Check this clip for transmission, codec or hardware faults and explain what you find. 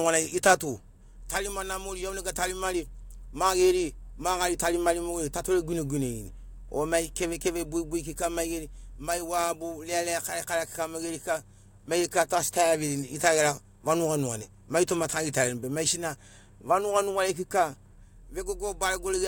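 Nothing here needs flagging; the speech comes through without any fault I can point to.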